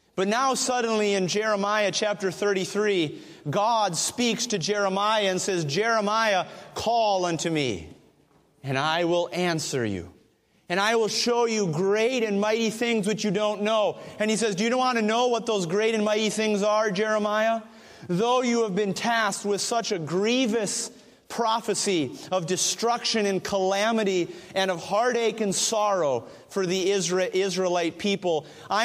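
No technical fault can be heard anywhere in this audio. Nothing in it points to a problem in how the sound was captured, carried or played back.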